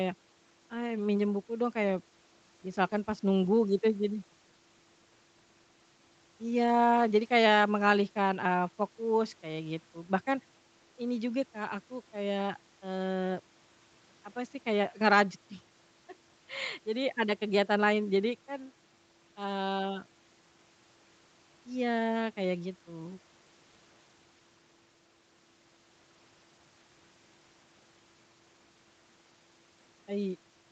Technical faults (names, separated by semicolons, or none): none